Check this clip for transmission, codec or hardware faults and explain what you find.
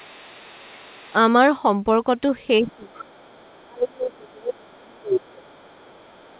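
Two echo-canceller faults recur through this speech, heard over a call path with nothing above 4 kHz, which fits narrowband G.711.

Other side's voice leaking through, 0.0–1.16 s, 2.67–3.66 s and 4.95–6.39 s: a second voice about 25 dB down (about 35 dB at the end), likely residual loudspeaker echo. Unlike crosstalk, it tracks the far side's speech.

Speech suppressed in double talk, 1.10–1.14 s (a slight dip), 2.59–3.20 s and 3.66–5.48 s (drops of about 30 dB): the talker fades while the far side talks, likely aggressive echo suppression.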